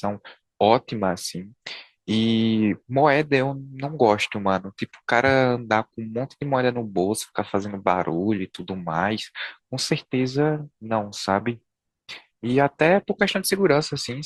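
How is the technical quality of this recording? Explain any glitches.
The recording has one glitch, near the end. From 11.70 s until the clip finishes at about 14.25 s, the stream switches to a lower bitrate: the adaptive player, faced with a slowing connection, swapped to a leaner encoding of the same speech without pausing. The sound matches a step down from roughly 64 to 24 kbit/s Opus. The change is abrupt and gapless, but coding artefacts become more noticeable for that final stretch.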